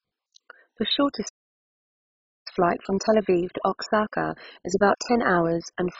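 From the first moment, the speech is dull and band-limited, with nothing above 7.5 kHz, and carries a gurgling, granular roughness over every syllable. This is heavy MP2 compression, likely at a very low bitrate, consistent with something near 16 kbps. Layer II divides the spectrum into 32 sub-bands and shares out a bit budget among them; starved of bits, the encoder drops the upper bands entirely and quantises the surviving ones coarsely, so their content flickers and turns grainy.

At 1.28 s the speech cuts out abruptly mid-flow and stays silent until 2.47 s, a gap of about 1.17 s. This is a playback stall, the likely result of the player's buffer running dry or its output thread being blocked, so no samples reached the output until it recovered.

From 2.47 s to 5.47 s the player works through that backlog with time-compressed catch-up, running at about 1.1 times normal speed. It achieves this by removing short slices of the waveform and cross-fading across the joins rather than resampling, so pitch stays where it should while the delivery sounds hurried.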